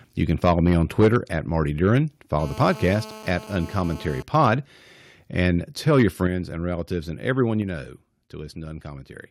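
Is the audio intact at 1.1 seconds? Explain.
No. From 0.3 to 1.16 s the microphone input volume was likely set too high, causing microphone overload: peaks drive about 7 dB past the converter's limit, so a small share of samples is flattened, giving loud syllables a harsh, crackling edge. At 1.05 s the microphone volume stepped down, likely the call software lowering input gain after detecting clipping. Voice and background drop abruptly by about 2 dB.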